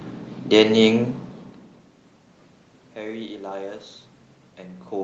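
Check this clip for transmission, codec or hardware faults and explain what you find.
Nothing stood out on listening to this speech clip.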